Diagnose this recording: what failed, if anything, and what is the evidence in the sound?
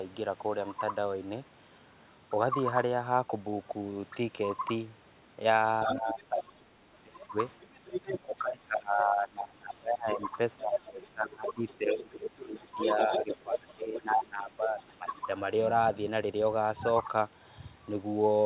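Speech suppressed in double talk, in call processing: speech dips by about 20–25 dB at 5.86–7.37, 8.25–10.19 and 10.58–15.29 s, likely the echo canceller ducking during overlap. Unlike packet loss, the dips follow the other talker.

Other side's voice leaking through, also in call processing: a second voice sits about 10 dB down to level with the speech at 5.9–6.1, 7.62–8.39, 10.72–11.06 and 11.47–14.0 s. This is likely residual loudspeaker echo, not crosstalk, because it mostly coincides with the suppression.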